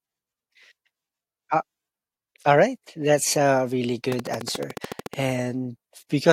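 From 4.12 to 5.15 s the speech carries a train of clicks: around fifteen near-identical pulses at a regular 13.8 per second, standing roughly 10 dB above the signal. They sound like steady ticking, likely from electrical interference or a faulty connection.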